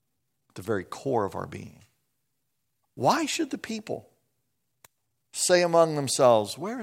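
A short speech clip carrying one corrupt frame decoded, between 0.62 and 0.65 s, just after "at the" and before "core of our". For a couple of frames the decoder played data with flipped bits. Misread gains and codes put energy in the wrong frequency bands, heard as a quick chirp or blip. On a spectrogram it shows as a brief smear of misplaced energy that breaks the harmonic pattern. The waveform shows a small glitch peaking at roughly -35 dBFS.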